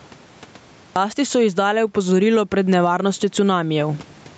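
Throughout the speech, the gain swings by roughly 15 dB, pulling down on each loud sound and squashing loud and soft parts closer together. This is gain pumping, likely from input gain set far too high and a fast limiter clamping down.

At 0.74 s, after a 0.74 s silence, "so izdale opozorilo pred" starts abruptly, its opening sounds missing. This clipped start after a pause comes from the output device waking from sleep, which swallowed about 0.22 s, up to 0.96 s.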